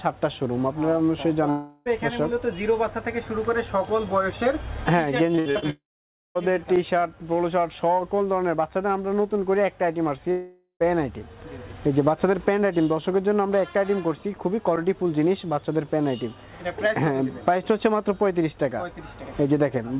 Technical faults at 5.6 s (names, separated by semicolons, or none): repeated packet loss (robotic sound)